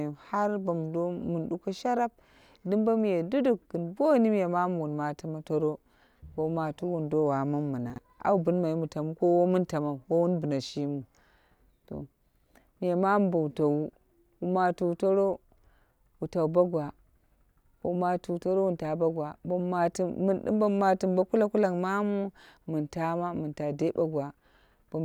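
At 7.9 to 7.98 s, the speech jumps in a short jumbled moment. This is chunks out of order. One block of audio plays late, after the blocks that should follow it. The sound fits 20 ms chunks, with one arriving about three chunks behind its place. Nothing goes missing, but the sequence is scrambled. Each misplaced join is a hard edge, so three hard joins frame a brief garbled stretch.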